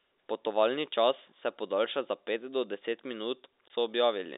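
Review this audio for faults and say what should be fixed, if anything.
Packet loss filled with silence cuts a hole in the speech from 3.68 to 3.70 s. That 20 ms gap fits a single lost packet. The receiver played silence instead, so the waveform drops abruptly to a flat line with hard edges. A spectrogram shows a narrow blank vertical stripe, standing out against the telephone band of about 300 Hz to 3.7 kHz that the G.711 line carries. To prevent it, the receiver should use packet loss concealment and a jitter buffer, with forward error correction on lossy links.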